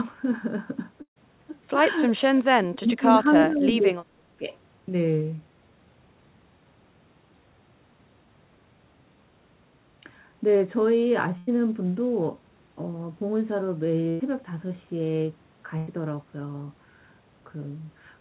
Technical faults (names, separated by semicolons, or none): burst of packet loss; speech suppressed in double talk; echo leak